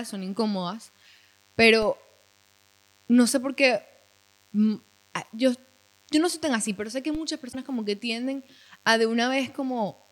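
From the first moment to the end of the speech, a DECT cordless phone buzz sits underneath everything, faint at roughly 40 dB below the voice. A nearby handset or base station transmits a burst every 10 ms, and the audio circuitry rectifies it into a thin, steady 100 Hz buzz rich in harmonics. On a spectrogram it shows as a comb of evenly spaced horizontal lines at 100 Hz and its multiples, unbroken through speech and pauses alike.

At 1.82 s the first DC step occurs. The waveform's zero line jumps abruptly to a new offset, which is heard as a low thump while the speech carries on unchanged. The offset then bleeds away as a 20 Hz high-pass pulls the baseline back toward centre within a few tens of milliseconds. In the waveform this looks like a sudden vertical shift of the whole trace followed by a curved return. On a spectrogram it is a brief vertical smear concentrated in the lowest band.

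At 7.15 s a second DC step repeats the pattern. The baseline jumps and then relaxes back through the same 20 Hz high-pass, giving another dull low thump over otherwise continuous speech.

From 7.51 to 7.55 s the audio briefly skips for about 42 ms, under two 26.1 ms frames. The likely cause is a broken MP3 bit reservoir. Frames were lost, so the following frame reached back into the reservoir for its borrowed data and decoded bytes that belonged to a different frame. The result is a short jump ahead in the speech.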